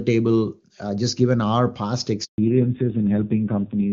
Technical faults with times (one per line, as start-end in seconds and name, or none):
2.24-2.38 handover gap
2.38-3.93 fallback to narrowband